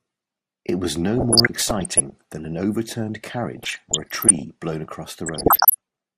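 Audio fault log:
throughout MP2 compression: the speech sounds dull and gurgly, with a granular roughness in what remains. This is likely MPEG Layer II coding starved of bits, switching off upper sub-bands and coarsely quantising the rest, which fits a rate around 80 kbps.
1.11–2.12 s, 3.57–4.42 s, 5.26–5.75 s DAB burbling: short blips of noise break over the speech. Bit errors, around 0.7 to 1 percent, slip past error correction into the MP2 data, so corrupted samples put short noise blips in single sub-bands and wrong scale factors, where they get through, make sub-bands jump in level for up to a frame.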